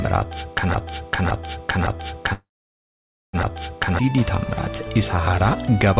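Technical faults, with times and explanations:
0.74–3.99 s, broken-record loop: the same 0.56 s piece plays four times back to back, likely a stall resending its last fragment, so that stretch's audio is lost.
2.33–3.36 s, call audio freeze: about 1 s of fill, with the last sound stretched and fading, 0.89 s of it silence, likely a starved jitter buffer. Nothing's missing, just delayed.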